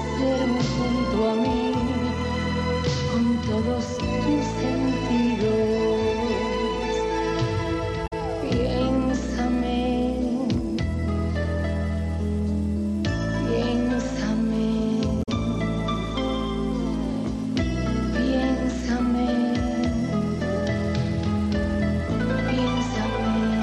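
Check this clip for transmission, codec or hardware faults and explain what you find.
Two brief codec faults stand out, both of the same kind.

At 8.06 to 8.13 s and again at 15.22 to 15.29 s, a short chirp, squawk, click or hole of about 70 ms breaks into the sound. This is damaged data in a compressed stream: corrupted bytes there make the decoder misread frames, lose sync and hunt for the next valid frame header.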